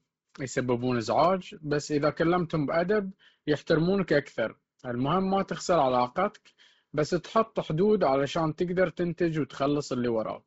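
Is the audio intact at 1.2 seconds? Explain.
No. At 1.25 s there is a bit error spike: a flipped bit in a digital sample value makes the waveform jump abruptly by a power-of-two step for just a couple of samples and then snap back. It is heard as one sharp, dry tick with no connection to the speech around it. On a waveform it is a lone needle standing out from the signal. On a spectrogram it is a thin vertical line running through every frequency.

That moment also carries the damage present through the whole clip. The speech has a breathy, grainy edge, and nothing sits above 7.7 kHz. The likely cause is heavy Bluetooth LC3 compression. The sound fits a low bitrate of around 16 kbps with 10 ms frames, where much of the upper band is dropped and filled with noise. On a spectrogram the energy stops at a hard ceiling near 7.7 kHz, and the upper region looks speckled and blotchy rather than showing clean harmonic detail.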